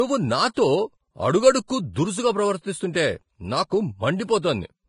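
From start to finish the speech carries heavy damage that points to Vorbis compression, likely at a low setting; the degree of damage fits a bitrate near 27 kbps. Nothing is heard above 10.5 kHz, and the remaining treble turns hissy and grainy, with consonant attacks smeared and tonal parts roughened. Unlike a plain low-pass filter, the upper band sounds replaced by noise of similar energy rather than simply removed.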